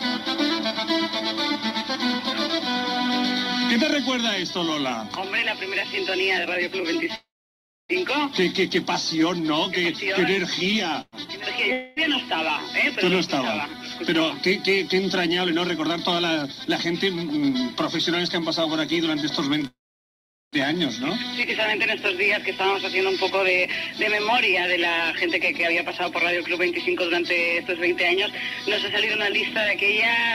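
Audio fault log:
7.15–7.92 s, 11.01–11.15 s, 19.67–20.56 s: call audio freeze. Packets were likely held up, so the jitter buffer ran empty. The last sound is stretched into a fading buzz, with about 0.63 s and 0.78 s of silence in the longer two. Playback then resumes where it stopped, adding delay without losing audio.
11.72–11.99 s: long network dropout. About 0.24 s of audio likely never arrived. The receiver covers the hole with a fading continuation of the preceding sound, with no true silence, and the audio comes back further on with that stretch missing.
14.94–17.18 s, 22.73–28.17 s: jitter buffer speed-up. With more audio queued than it targets, the receiver trims pitch-period-sized slices repeatedly, removing roughly a tenth of a second in each stretch. Playback runs at 104% and then 102% at unchanged pitch.
21.43–21.46 s: skip ahead. Later audio was already waiting, so a stretch of roughly 0.7 s was dropped to catch up. 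Playback jumps forward almost seamlessly, joining the two sides of the cut directly with that material gone.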